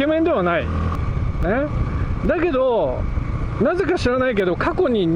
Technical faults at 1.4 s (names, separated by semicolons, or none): dropped samples